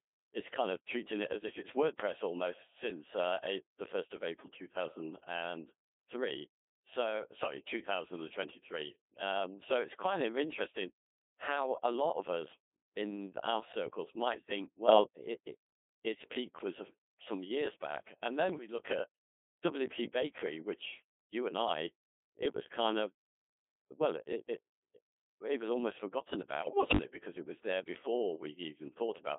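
Codec 2 vocoder processing runs through the whole clip. The speech is confined to roughly 250 Hz to 3.6 kHz and sounds robotic and buzzy, which fits a 2.4 kbit/s mode. The damage is heavy because only pitch, voicing, energy and a spectral envelope survive transmission. The decoder rebuilds the voice from sine waves instead of the original waveform, so the natural texture of the speech is lost.

Bit errors on digital voice radio break the synthetic voice four times. The first is from 14.86 to 15.04 s, after "our circles might think" and before "it it its peak". The next is from 18.50 to 18.68 s, just before "look at", and another is from 22.46 to 22.60 s. The longest is from 26.62 to 26.98 s, right after "it was almost forgotten". In a vocoder this sparse, each flipped bit sets the pitch, level, voicing or spectrum of a whole frame. A small error rate therefore produces sudden pitch jumps, level changes and bleeping, warbling gibberish. 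The first burst suggests about two errors per hundred bits and the later ones about five. The final burst lasts long enough to corrupt 14 frames in a row.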